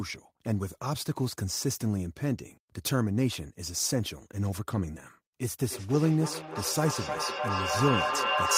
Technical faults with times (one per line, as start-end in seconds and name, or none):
5.49-8.57 feedback echo between two devices